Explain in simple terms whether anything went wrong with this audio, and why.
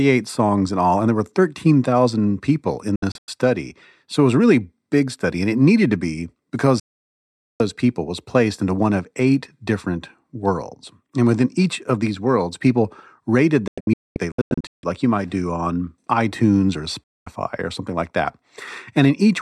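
The receiver kept losing the digital signal, a digital broadcast dropout, and went silent until clean data returned. Speech cuts out after "people in" at 2.96–3.28 s, after "it needed to be" at 6.80–7.60 s, in broken gaps at 13.68–14.84 s, and before "or something like that" at 17.04–17.27 s. Those moments are lost.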